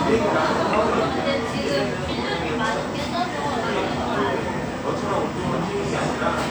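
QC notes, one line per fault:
No audible faults detected.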